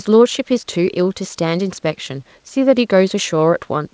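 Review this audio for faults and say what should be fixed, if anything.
There are no faults in this audio, so nothing needs to be fixed.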